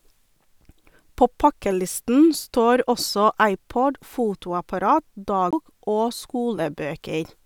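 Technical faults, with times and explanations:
5.51–5.53 s, CD skip: the speech cuts out with a mute of about 20 ms, then resumes from another point because the laser jumped to another turn of the disc's spiral. Unlike a plain dropout, the sound does not pick up where it stopped.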